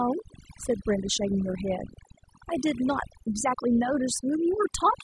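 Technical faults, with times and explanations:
Throughout, overdone noise removal. The background drops and breaks up, with small twinkling specks where noise used to be. Noise reduction set too strong cuts individual frequency bands whenever they sit near the noise estimate. Quiet parts of the speech vanish too.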